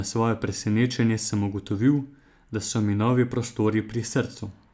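No technical faults can be heard anywhere in this recording of speech.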